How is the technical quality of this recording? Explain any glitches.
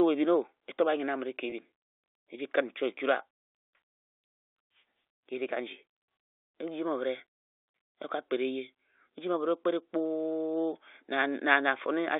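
The recording carries telephone-band speech, roughly 300 Hz to 3.6 kHz, consistent with G.711 coding, and has one glitch. At 1.50 to 1.52 s, packet loss with pitch repetition: about 20 ms of audio, which fits a single lost packet, was bridged by repeating the last pitch period, giving a brief held, buzzy tone.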